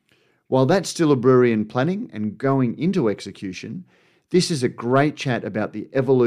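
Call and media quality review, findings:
No call or media quality findings to report for this audio.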